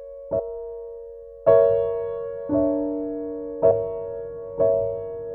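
Compressed frames skipped at 0.38 s and 3.70 s: the sound jumps forward, by roughly 300 ms and then 150 ms, which points to about fifteen and seven dropped 26.1 ms frames. Overlapping neighbour frames smear each join into a short blurred blip, not a click.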